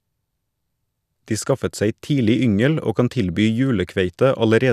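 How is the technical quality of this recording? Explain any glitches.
Listening closely, nothing in the recording stood out as a glitch or technical problem.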